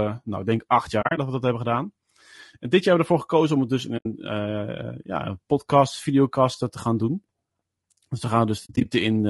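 From the start the speech sounds rough and grainy, with noise filling the spaces between pitch harmonics and a thin, synthetic-sounding top band. This is plainly audible low-delay AAC compression, likely AAC-ELD at a rate that fits about 32 kbps, whose short frames resolve harmonics poorly.

AAC frame loss with muting then leaves three soft-edged holes. At 1.01 to 1.18 s, between "nou ik denk acht" and "dat we dat hebben", about 100 ms drops out in gaps spread over 160 ms, the longest around 40 ms. At 3.97 to 4.06 s, after "om het dus in", 80 ms falls silent. At 8.65 to 8.86 s, 120 ms is lost across 200 ms. In each hole the decoder zeroed the missing frames, and its overlapping windows faded the sound out and back in.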